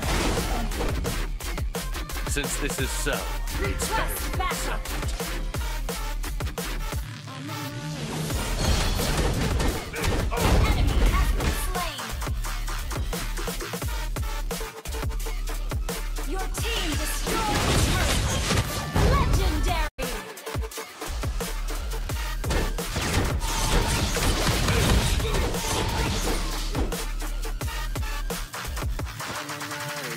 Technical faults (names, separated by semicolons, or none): digital broadcast dropout